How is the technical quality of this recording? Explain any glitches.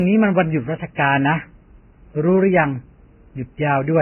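The recording is compromised throughout by transcoding between lossy codecs. The likely cause is a very low-bitrate Vorbis encode, in the range of 10 kbit/s, later re-encoded as WMA 1, in the region of 96 kbit/s. The second encoder spends bits preserving the first encoder's smearing and adds its own. The speech has nothing above 16.1 kHz and carries the mixed artefacts of both codecs.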